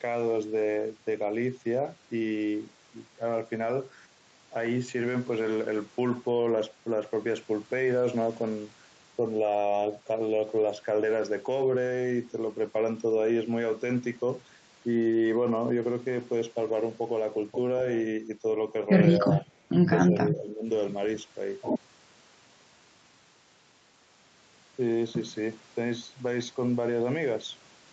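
From 19.18 to 19.44 s and 20.09 to 20.66 s the speech ducks by about 5, then 10 dB, likely speech suppressed in double talk, dipping rather than dropping out completely.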